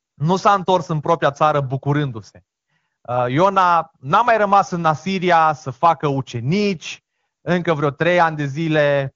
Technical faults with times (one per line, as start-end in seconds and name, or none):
none